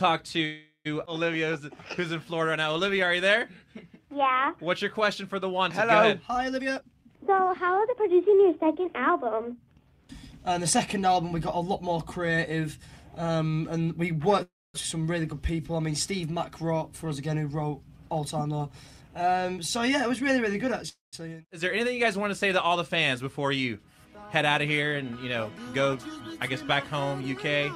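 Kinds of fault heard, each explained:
Call audio freeze: packets were likely held up in transit until the jitter buffer ran empty, so the receiver drew out the last sound as a fading buzz and then went quiet. When audio resumed it carried on from where it stopped, inserting a gap with nothing lost. This happens at 0.45 s for 0.4 s, at 14.43 s for 0.34 s with a quarter-second of silence, and at 20.89 s for 0.26 s.
Jitter buffer speed-up: the buffer had built up more audio than its target, so the receiver cut short slices of one or a few pitch periods again and again to reduce the delay. The sound runs faster at the same pitch and feels hurried. From 6.58 to 9.56 s it plays at 114% speed, shedding roughly 0.4 s. From 18.41 to 20.84 s it plays at 111%, shedding about 0.3 s, just before the third freeze.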